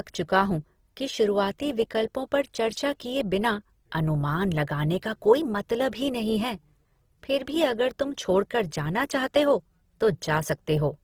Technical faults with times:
0.00-11.04 Opus compression

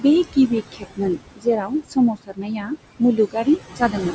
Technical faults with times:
0.00-4.14 noise suppressor artifacts
0.72-1.73 speech cut by the noise suppressor
2.13-2.72 speech cut by the noise suppressor
2.99-3.47 speech cut by the noise suppressor
3.76-3.95 speech cut by the noise suppressor

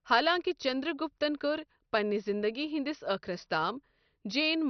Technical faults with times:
0.00-4.69 MP2 compression

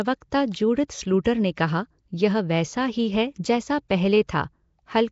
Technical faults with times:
0.00-5.12 Nellymoser compression

